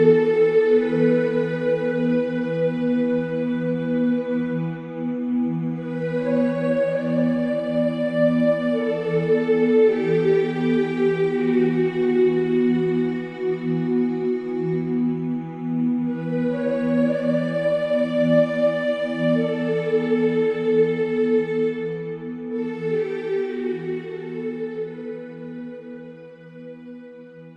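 No technical faults can be heard anywhere in this audio.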